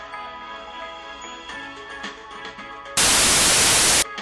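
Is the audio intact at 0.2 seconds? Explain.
Yes, the audio at 0.2 s is intact, with no dropout, click, distortion or other fault at that moment.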